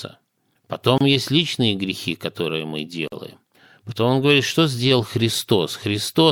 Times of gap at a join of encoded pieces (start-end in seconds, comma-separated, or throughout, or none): 0.98-1.01, 3.08-3.12